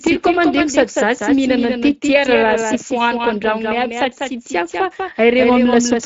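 Right from the start and all the way through, the speech has a doubled audio track: a second full-band copy trails the original by roughly a fifth of a second, sitting just a few dB below it. There's no decay or room colour on it, so it sounds like a flat, hard echo rather than a space. That's most likely the same signal getting picked up twice, once through a slower path, so the two copies land out of step.

Over the whole clip you can also hear the Speex codec working hard. The excitation is clearly starved, so the speech comes across noisy and a bit hoarse, with that grainy CELP texture. Nothing comes through above 7.7 kHz, and the top band above 4 kHz sounds like a shaped hiss fill rather than real detail. Taken together, that points to a middling Speex quality setting, somewhere around 17 kbps.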